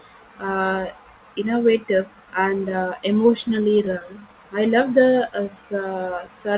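From 3.14 to 4.34 s, after "uh innovative and uh" and before "I love", repeated stalls (stutter) occur. Late packets emptied the jitter buffer fifteen times, each gap briefly filled by continuing the last sound, so the audio drags and stutters. The waveform shows short smeared repeats of no more than 14 ms each.

From 5.30 to 5.69 s, a jitter buffer slow-down repeats pitch periods, adding 64 ms and slowing the audio to 86% speed at unchanged pitch. On the spectrogram, harmonics stretch horizontally, and the band stays empty above 4 kHz, as expected from a narrowband call codec.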